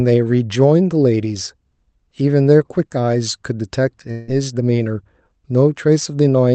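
From 4.11 to 4.30 s the speech smears into a fading buzzy hiss and then picks up again with about 160 ms missing, the likely sign of a long network dropout, with the receiver stretching the last sound to cover the gap over the call path's 8 kHz band.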